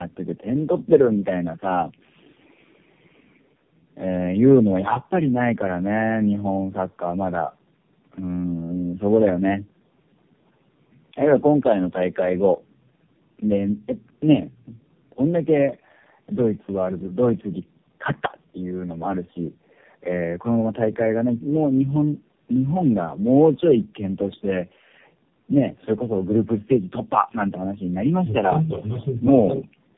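From start to finish, the speech carries tandem speech coding. Three narrowband speech coders sit in a row: AMR-NB, then one that sounds like G.729A, then AMR-NB again at a lower rate, each re-encoding the previous one's decoded output. Nothing reaches above 3.5 kHz. The result is rough, muffled and warbly, with a gargly wobble. That compounded roughness, worse than any single low-bitrate coder, sets it apart from one codec alone. The bass roll-off from the call's microphone processing is normal.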